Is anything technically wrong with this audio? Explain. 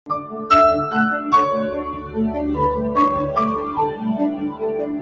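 Yes. Three faults are present.

Hard clipping runs throughout. The signal is driven about 5 dB past what the chain can pass, so a small fraction of samples have their peaks cut flat. Those flat tops generate high harmonics, heard as crackle and a gritty edge on the loudest moments.

A noise suppressor applied to music or sounds is active for the whole clip. Built for speech, it treats sustained tones, ambience and decays as noise and pulls them down by roughly 10 dB at a time, so the level pumps and the sound thins between attacks.

The sound is cut by the noise suppressor twice: from 0.06 to 0.5 s, dropping by about 12 dB at its deepest, and from 1.9 to 2.17 s, by about 7 dB. Here the suppressor judged the material to be noise and clamped it harder, so the level sinks and tails are cut short. The call microphone processing, which passes nothing above 8 kHz, is not a fault.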